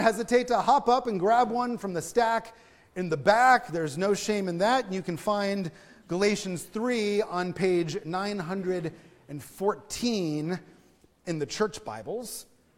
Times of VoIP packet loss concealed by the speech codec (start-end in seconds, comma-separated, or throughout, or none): none